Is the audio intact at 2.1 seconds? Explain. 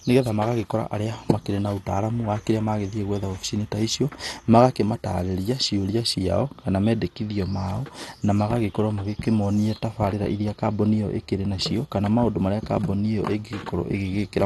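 No: at 2.1 seconds, as throughout the speech, likely MP2 compression starves the upper sub-bands, leaving nothing above 12.2 kHz and a dull, gurgling, granular sound that fits roughly 64 kbps.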